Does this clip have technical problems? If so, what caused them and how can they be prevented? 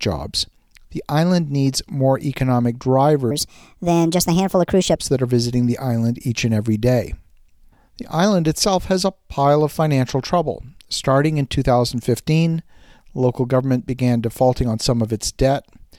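Yes. From 3.31 to 4.96 s, just after "island needs more economic" and until "that are visiting the", the speech turns suddenly high and hurried, running at 1.34 times its proper speed and lifting the voice by about five semitones before snapping back. This is a section at the wrong speed, likely caused by an editor or player fitting that stretch to the wrong clock, so timing and pitch shift together. Keep every segment at the project's sample rate and check edits at the boundaries before export.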